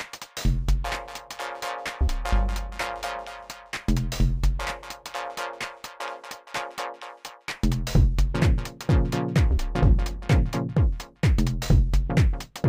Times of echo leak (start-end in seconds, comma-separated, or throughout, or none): none